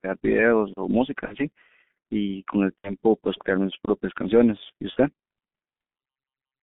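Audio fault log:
Throughout: G.723.1 codec. The speech is band-limited to roughly 150 Hz to 3.5 kHz and heavily coded, consistent with the 6.3 kbit/s mode. Its slowly updated 30 ms vocal model leaves the speech muffled and hoarse with smeared consonants. On a spectrogram, energy stops flat at 3.5 kHz and harmonics look grainy.
1.25–1.36 s, 2.79–2.94 s, 4.91–4.97 s: VoIP packet loss concealed by the speech codec. Gaps of about 60, 60 and 30 ms, fitting two, two and one 30 ms frames, were filled by extrapolating the last pitch and filter. The result is a stretched, fading sound in place of the lost speech. On a spectrogram the harmonics go flat and repetitive, and on the waveform the envelope tapers down and then recovers slowly.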